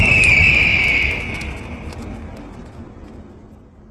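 From 1.25 s to the end, the sound abruptly loses everything above 12.3 kHz and turns synthetic, with no gap. This is an adaptive stream dropping to a lower bitrate.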